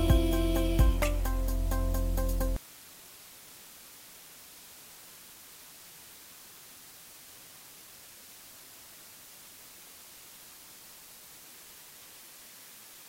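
A constant, even hiss sits under the sound from start to finish, fairly loud against it but free of any grit or distortion. This is low bit depth with dither: the audio was reduced to about 7 bits, with dither turning the rounding error into steady white noise.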